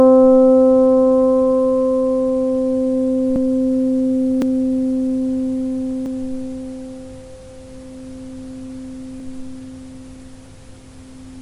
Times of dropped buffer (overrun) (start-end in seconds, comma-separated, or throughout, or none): 3.36, 4.42, 6.06, 9.20, 10.46